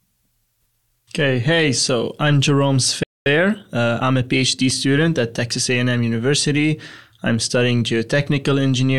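At 3.03 s the player most likely ran short of buffered data, or its output thread was held up, so nothing reached the output for about 0.23 s, until 3.26 s. This is a playback stall. The speech cuts off in mid-flow and the gap is plain silence. After the gap, the speech carries on.

From 3.26 s to 4.76 s the player works off the backlog from the stall. It removes short slices of the signal and cross-fades across each join, which runs the audio at about 1.15 times normal speed. This is time-compressed catch-up. Because it drops material instead of resampling, the pitch stays where it was, but the speech sounds hurried for that second and a half.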